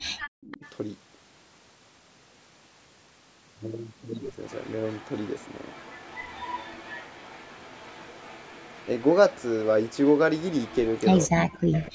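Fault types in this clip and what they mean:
Speech suppressed in double talk: near 0.4 s the voice itself drops about 35 dB for roughly 200 ms, likely because both sides talked at once.
Echo leak: a copy of the voice repeats 252 ms late, about 25 dB down (about 15 dB down in the last stretch), likely loudspeaker sound the canceller missed; it adds sound rather than removing it.
Background gated by the echo canceller: around 11.6 s the room sound, not the voice, drops about 40 dB for roughly 150 ms, then returns.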